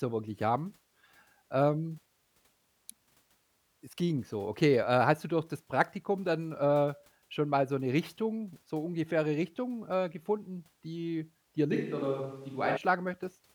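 Switch to a distant microphone, 11.73 to 12.75 s: the speech abruptly turns roomy and thin at a similar level, likely because the close microphone's signal dropped out.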